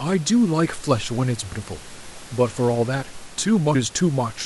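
Speech with compressed frames skipped at 1.51 s and 3.74 s, where the audio jumps ahead by roughly a tenth of a second, about five frames of a codec using 23.2 ms frames. Unlike a dropout, no silent gap appears. Room noise sits about 21 dB below the speech.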